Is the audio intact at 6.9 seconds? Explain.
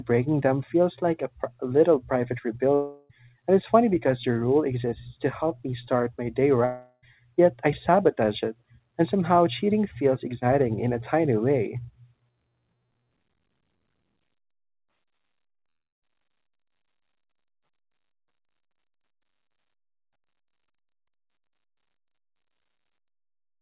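No. A likely long network dropout spans 6.65 to 7.03 s, after "me start my day": concealment stretches the last sound into a fading buzz or hiss, then brief silence before "yet I sabotage it".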